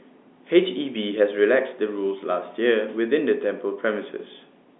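Speech carried over G.711 A-law telephone coding, with nothing technically wrong with it.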